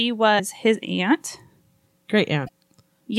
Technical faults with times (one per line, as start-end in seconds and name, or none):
0.36-0.40 damaged data in a compressed stream
2.44-2.49 damaged data in a compressed stream